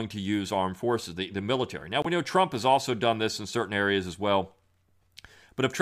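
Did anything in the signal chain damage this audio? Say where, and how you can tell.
Yes. At 2.02 to 2.06 s the speech cuts to silence for about 36 ms, just before "we know". When it returns, it has moved on rather than picking up where it stopped, which fits roughly 23 ms of audio going missing, about one codec frame. This is likely a Bluetooth dropout on the wireless link: a packet reached the headphones too late and was discarded, leaving the output muted until the next good packet.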